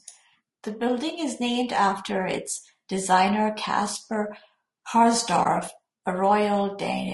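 From start to finish the speech has a rough, grainy texture with noise filling the gaps between harmonics and a thin, synthetic top end. That's plainly audible low-delay AAC compression, likely AAC-ELD at a low bitrate around 32 kbps, where short frames can't resolve pitch detail well.

At about 5.43 to 5.46 s the sound briefly fades out and back in, leaving a brief dip. That's AAC frame loss with muting: the decoder zeroed the missing spectrum, and the overlapping windows smoothed the gap, which fits a single lost frame of about 20 ms.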